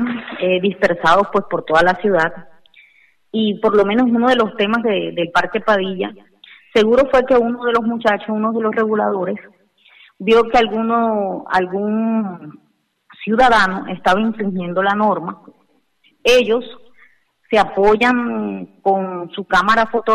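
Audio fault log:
No technical faults can be heard at any point in the signal.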